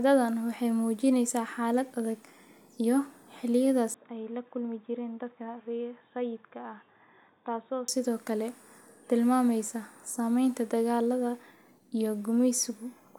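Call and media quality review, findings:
Speech turns dull and boxy from 3.94 to 7.88 s, nothing above 3.8 kHz, level down about 5 dB, noise floor roughly 45 dB under signal, no gap at switch. Likely input switched to a poorer device, narrowband capture path.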